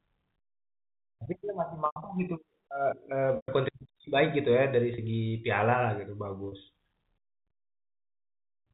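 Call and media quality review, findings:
Packet loss with pitch repetition at 1.86 s (100 ms), 3.36 s (120 ms), 4.94 s and 6.48 s (40 ms each). Receiver concealment repeats the last pitch period: buzzy hold, with the longer gaps fading to silence.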